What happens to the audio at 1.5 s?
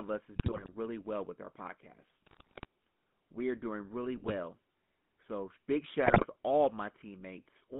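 At 1.5 s the speech is passing through a GSM full-rate codec, as it does for the whole clip, with a heavily coded quality that fits about 13 kbps. The vocal tract is modelled and driven by a thinned, regular pulse excitation, giving a plainly audible buzzy, gravelly roughness within a narrow line band of roughly 150 Hz to 3.5 kHz.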